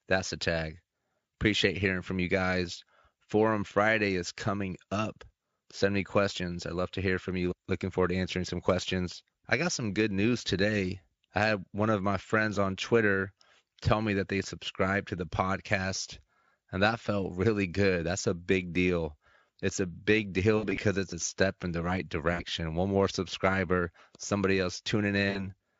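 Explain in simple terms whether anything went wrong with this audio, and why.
VoIP packet loss concealed by the speech codec hits the speech at 20.57 to 20.79 s, 22.33 to 22.44 s and 25.29 to 25.54 s. Bits of the call never arrived, so the decoder guessed at the missing moments by repeating the pitch and tone it had just heard while fading them down. That produces brief buzzy or smeared gaps, the longest run of missing sound being 60 ms, with the voice staying weak a moment afterward.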